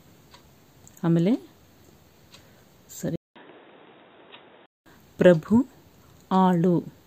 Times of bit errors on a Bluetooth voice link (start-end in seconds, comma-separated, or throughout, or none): none